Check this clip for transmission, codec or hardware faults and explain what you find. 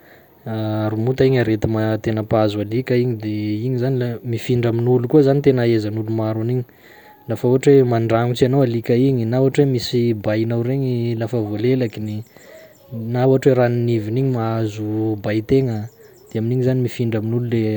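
No faults detected here.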